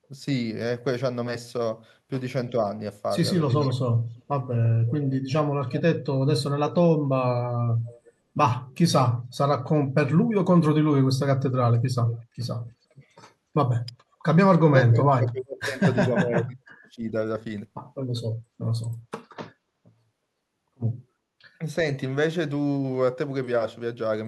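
Starting at 3.61 s there's an echo leak. A faint delayed copy of the speech trails the original by about 350 ms, sitting roughly 20 dB down, and it runs to 4.22 s. It comes back from 4.87 to 5.82 s, a bit louder at around 15 dB below, then as a brief scrap at 6.67 s and a very faint one at 7.88–8.12 s. The last one is at 12.05–12.21 s, where the delay has crept up to about 360 ms. The likely culprit is a speakerphone on the far end whose echo canceller isn't fully removing what its mic picks up from the loudspeaker.

Overlapping that first echo, at 3.72–3.79 s, the speech briefly dips by something like 20 dB. That's speech suppressed in double talk: the canceller likely couldn't tell the local talker from the echo and turned everything down. Another short 70 ms dip of roughly 25 dB hits at 12.93 s. The big one runs from 14.66 to 17.14 s, with chunks of the speech pushed down by as much as 40 dB over about two seconds in total.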